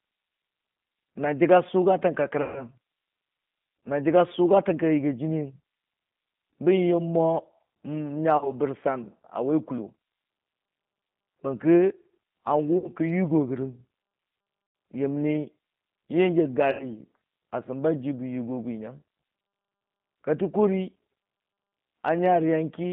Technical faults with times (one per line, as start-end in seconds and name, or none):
0.00-22.93 G.729 codec
2.42-2.65 VoIP packet loss concealed by the speech codec
8.37-8.53 VoIP packet loss concealed by the speech codec
12.78-12.90 VoIP packet loss concealed by the speech codec
14.67-14.75 VoIP packet loss concealed by the speech codec
16.71-16.90 VoIP packet loss concealed by the speech codec